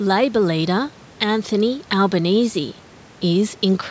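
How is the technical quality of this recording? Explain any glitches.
No glitches; the speech is intact throughout.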